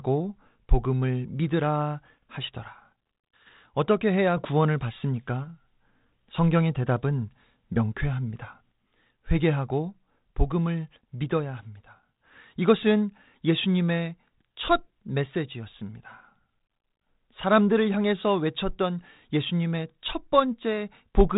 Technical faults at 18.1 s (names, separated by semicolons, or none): none